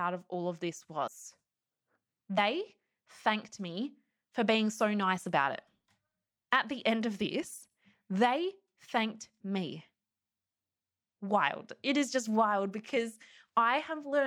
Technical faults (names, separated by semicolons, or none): compressed frames skipped